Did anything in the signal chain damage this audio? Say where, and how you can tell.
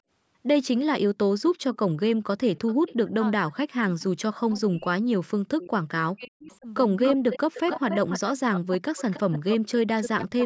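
Yes. The fault sits in call processing, as an echo leak: the far end's echo canceller likely failed to remove what its microphone picked up from the loudspeaker. A delayed copy trails the speech by 349 ms, faint at 1.46–1.76, 2.56–2.95 and 4.00–4.04 s. From 6.44 s to the end it returns at 284 ms and much louder, only about 10 dB under the speech.

Speech was also suppressed in double talk, again in call processing. With both sides talking at once, the canceller likely confused the talker with loudspeaker echo and turned it down. Between 3.01 and 6.67 s, about two seconds of speech dip or drop out in pieces, by as much as about 40 dB. A shorter cut of roughly 0.2 s falls between 7.20 and 7.83 s.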